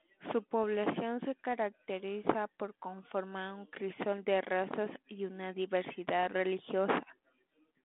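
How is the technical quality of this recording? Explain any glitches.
The speech has three short glitches from bit errors on an ADPCM link. They fall at 0.63 s, from 2.24 to 2.31 s just before "por conformar un crisol", and from 6.21 to 6.32 s. A flipped bit corrupts one coded difference value. It also knocks the decoder's step size and predictor off track, so the error keeps ringing for several milliseconds. They come through as pops and rough bursts with brief level jumps. The speech passes through a 32 kbit/s G.726 path, limited to the narrow 200 Hz to 3.5 kHz telephone band.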